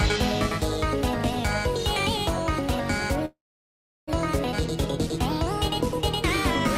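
Call audio freeze, 3.25 to 4.09 s: the sound stops and leaves a gap of about 0.82 s, most of it (0.72 s) silence, likely because delayed packets emptied the jitter buffer. Playback then resumes with nothing lost.

Skip ahead at 4.51 s: playback jumps forward almost seamlessly. Roughly 0.4 s of audio is dropped, probably discarded to recover the delay the freeze built up.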